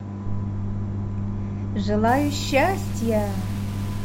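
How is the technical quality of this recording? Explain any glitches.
Quality drops sharply in the second half. From 2.08 s to the end, the speech turns grainy and rough, most likely from low bit depth without dither: the samples appear rounded to about 6 bits, leaving an error floor only about 20 dB below the signal. Because that error tracks the waveform, the grit changes with the speech, and quiet tails break up or fall silent. A waveform shows visible staircase steps. A spectrogram shows broadband hash that appears only where speech energy is present.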